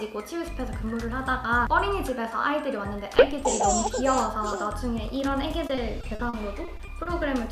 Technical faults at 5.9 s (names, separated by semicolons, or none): repeated packet loss (robotic sound)